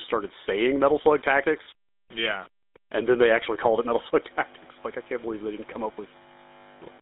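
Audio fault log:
Throughout: low bit depth without dither. A grainy, gritty distortion rides on the speech and shifts with it, roughest on quiet sounds and trailing syllables. The likely cause is rounding to about 7 bits with no dither, leaving error roughly 25 dB below the signal.
Throughout: GSM full-rate codec. The speech sounds buzzy and gravelly, heard over a narrow telephone band from about 250 Hz to 3.7 kHz. The codec rebuilds speech from a vocal-tract model driven by sparse regular pulses at 13 kbps. That coarse excitation produces the plainly audible rasp.
1.64 to 1.67 s: lost GSM frames. A brief rough, metallic ring briefly holds the sound in place of fresh speech. The decoder repeated the last good frame's settings, and the short gap fits a single lost 20 ms frame.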